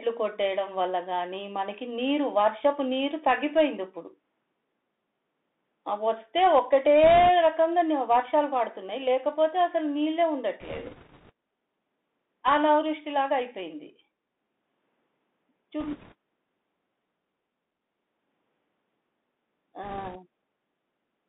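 Throughout the speech, the Bluetooth CVSD headset codec limits the band to roughly 200 Hz to 3.6 kHz, which fits a 64 kbps CVSD link. The codec sends one bit per sample, so the waveform can only step up or down, with an adapting step size. Fast, loud high-frequency energy outruns that step and distorts. Sibilants come out scratchy, and a granular hiss sits under the speech. The damage is plainly audible.

Bit errors on a Bluetooth voice link then hit four short stretches: 7.04 to 7.28 s, 10.61 to 11.31 s, 15.80 to 16.14 s, and 19.83 to 20.17 s. Each CVSD bit carries only a small step, and the decoder recovers from a wrong one, so the flipped bits produce no sharp clicks. They produce a rushing, crackly noise over the speech instead. The error rate is a few percent in each burst, highest in the longest one, around 10.6 to 11.3 s, where the crackle is strongest.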